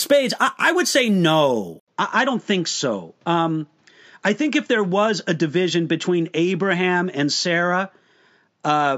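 Speech in which the input likely switched to a poorer device at 1.80 s, after "I would say no": an 80 ms gap, then duller sound with nothing above 7.6 kHz and faint new background noise.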